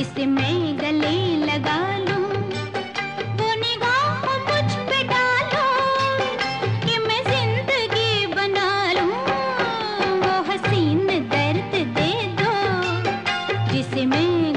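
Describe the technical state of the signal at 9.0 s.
At 9.0 s the signal is intact, with no technical fault audible at that moment.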